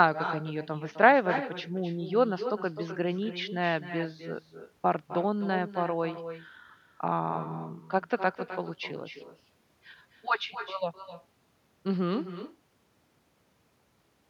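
Throughout the speech, every phrase is trailed by a quieter, thinner copy arriving about a third of a second later and about 10 dB down. This is echo with no canceller: the far end's loudspeaker feeds its microphone, and nothing subtracts the returning signal.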